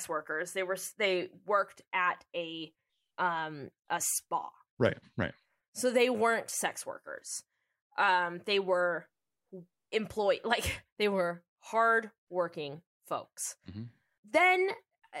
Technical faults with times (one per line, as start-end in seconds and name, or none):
none